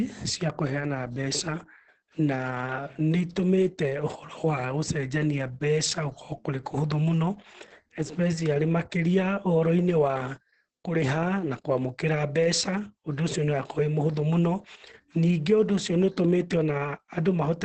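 Throughout the speech, Opus voice compression is starved of bits, consistent with about 10 kbps in its SILK predictive mode. The band stops at 8.6 kHz, and coarse excitation coding leaves the voice muffled, hoarse and faintly robotic, with heavy, pervasive damage.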